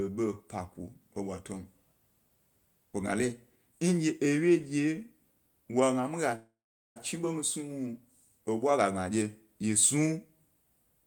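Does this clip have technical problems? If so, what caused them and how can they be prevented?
Yes, there's a call audio freeze from 6.35 to 6.98 s. The sound stretches into a fading buzz or hiss, then about 440 ms of silence. Speech resumes where it left off with nothing lost, now running about 600 ms late. The likely cause is delayed packets draining the jitter buffer. A more stable network path or a larger adaptive jitter buffer would help prevent it.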